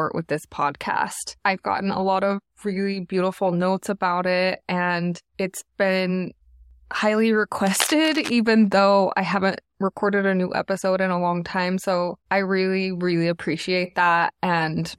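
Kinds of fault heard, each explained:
Cable scratch noise: From 7.67 to 8.30 s, just before "though I haven't recorded", a rough, uneven burst of scratching and rustling sits over the speech. It lasts about 0.63 s. The noise is dense and irregular, not a steady hiss. It is roughly 10 dB below the speech. The likely cause is a worn cable, plug or control being moved. Its contact resistance would jump about rapidly, adding these noisy bursts to the signal.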